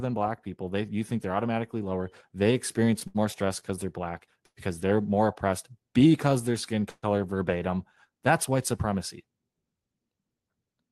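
Between 2.99 and 3.64 s the speech catches three times, at 2.99–3.03 s, 3.07–3.17 s and 3.60–3.64 s. Each time a sound is held too long with a slight buzz or dip, the second hold the longest at about 73 ms, and the speech then resumes where it left off. These are short stalls from a late packet: the jitter buffer ran dry, the receiver stretched the last sound until the packet arrived, and each stall added delay.

At 4.46–4.59 s and again at 6.90–7.04 s the speech stops for longer. A fading buzz or hiss runs out into about 50 ms and then about 30 ms of silence before the speech carries on, with nothing skipped. These are call audio freezes, likely caused by packets held up in the network. The receiver padded the gap with synthesized sound, delaying the speech by about 106 ms and 120 ms. Through the Opus call path, the highest frequencies stop at about 12 kHz.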